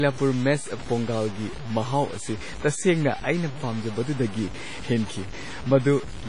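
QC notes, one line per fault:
throughout, low bit depth without dither: The speech sounds gritty and grainy, with a rough buzz that rises and falls with the voice instead of sitting steady underneath it. Soft syllables and decays break up and sputter before dropping to silence. The distortion sits only about 15 dB below the signal, which fits samples truncated to around 5 bits. The likely cause is truncation with no dither, so the rounding error tracks the waveform and becomes audible distortion.
throughout, WMA compression: The audio is washy and smeared, with a ringing quality around the voice and a hiss that swells and fades with each phrase. Nothing is present above 10.3 kHz, which dulls the top end and blunts consonants. The likely cause is heavy WMA coding at a low rate, consistent with roughly 24 kbps. Its long transform blocks spread quantisation noise over tens of milliseconds and discard weak spectral detail.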